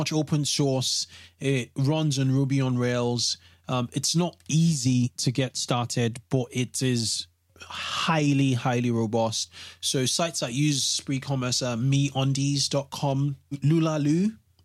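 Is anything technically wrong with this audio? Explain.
No, nothing technically wrong can be heard in this speech recording, and the signal holds steady throughout.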